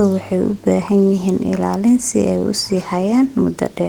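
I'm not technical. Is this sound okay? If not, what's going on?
Yes, it's fine: nothing in this bit of speech skips, crackles, warbles or drops out, so there's nothing to worry about.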